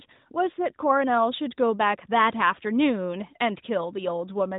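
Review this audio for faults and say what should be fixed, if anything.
Nothing needs fixing: the speech sits within the expected narrowband mobile-codec band, with nothing above 4 kHz and only the light coding texture that points to AMR-NB at about 12.2 kbps, so no fault to report and no remedy required.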